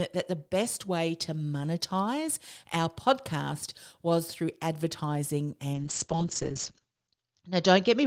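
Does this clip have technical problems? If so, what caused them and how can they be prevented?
Yes. From 5.74 s to the end of the clip, the speech is a call bitrate drop. The call's bandwidth estimate fell, so the encoder was told to spend far fewer bits, which fits a fall from about 32 to 8 kbps. The audio is coded more coarsely, and the top end is cut from 20 kHz down to 8 kHz, with the lowest rate held for 1.48 s and no recovery before the clip ends. A plain low-pass filter would remove treble without adding coding roughness, and packet loss would bring gaps or glitches rather than a steady coarsening. This can be prevented by giving the call more stable network capacity, for example a wired link or less competing traffic, and by setting a higher minimum bitrate for the encoder.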